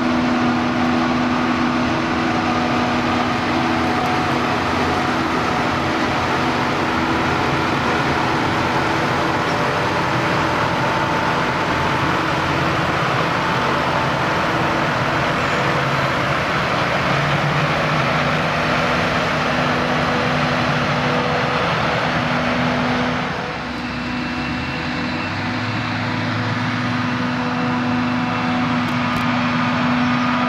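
Processor overload crackle runs from 28.89 to 29.21 s. The processor repeatedly failed to fill its short buffers, of a few milliseconds, on time, and about seven times old audio was replayed with hard edges. The result is a brief burst of gritty crackle over the sound.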